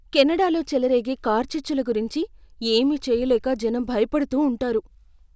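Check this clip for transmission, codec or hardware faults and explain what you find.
Nothing in the speech signal points to a technical fault; the audio arrives continuous and intact throughout, with nothing to explain.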